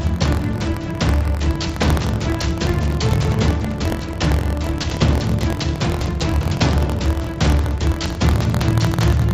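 A steady robotic rattle at about 43 Hz runs through the whole clip wherever sound is present. This is buffer tearing, which fits a 1024-sample buffer: a small sliver of each buffer replays audio from roughly 70 ms earlier, with hard joins, above a call-path band that stops at 7 kHz.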